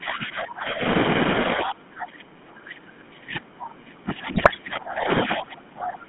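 GSM full-rate coding runs through the whole clip. The speech is squeezed into a band of roughly 150 Hz to 3.5 kHz and rebuilt from a vocal-tract filter driven by sparse, regularly spaced pulses, which fits the 13 kbps full-rate codec. The result is a plainly audible buzzy, gravelly roughness.

Speech suppressed in double talk comes next, from 0.0 to 0.82 s. The speech dips by up to about 25 dB for most of that stretch. The likely cause is an echo canceller that heard both ends talking at once, could not tell this talker from returning loudspeaker echo, and turned everything down.

The same suppression returns from 1.54 s to the end. The speech keeps sinking, thinning and cutting out in pieces, with the deepest drops around 30 dB, across about four seconds of the remaining audio.

GSM bit errors hit from 4.32 to 4.57 s, inside that suppressed stretch. Corrupted filter, pitch and gain values reached the decoder, which fits a dozen or so damaged 20 ms frames on a weak link with a few percent of bits flipped. 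Each bad frame distorts the spectrum or spikes the level, so the speech breaks into squawks, pops and gargling.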